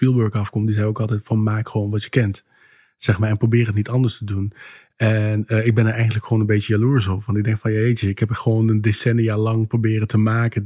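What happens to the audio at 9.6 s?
Nothing goes wrong at 9.6 s; the speech carries on intact through that moment.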